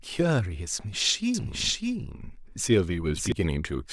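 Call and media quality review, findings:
Doubled audio track, 1.34–3.32 s: speech repeats at roughly equal level, about 0.7 s late, dry, with abrupt onset and cutoff. Likely a slower second capture path.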